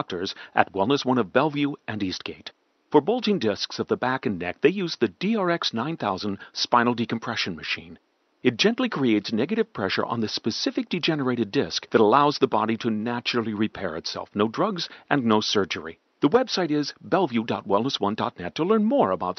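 No technical faults can be heard in this speech recording. The call path limits the top end to about 8 kHz, which fits an Opus call, and faint room noise sits about 45 dB below the speech.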